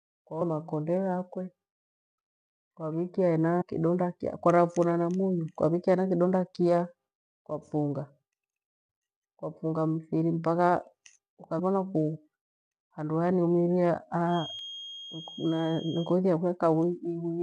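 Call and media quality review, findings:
Brief chirps and blips at 0.40 s, 3.60–3.62 s, 11.58 s and 14.59 s. Damaged data in the compressed stream: corrupted frames misread by the decoder, sync lost, playback resuming at the next valid frame header.

Thin, steady whistle at 3.2 kHz from 14.24 s to 16.16 s, sitting around 15 dB below the speech, swelling and fading slowly in level. Feedback whistle, likely from a loudspeaker-to-microphone loop held just short of runaway, sustaining one frequency without growing.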